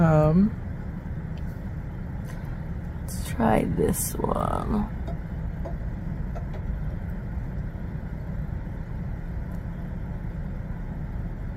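No faults detected; nothing audible points to a problem anywhere in the recording chain.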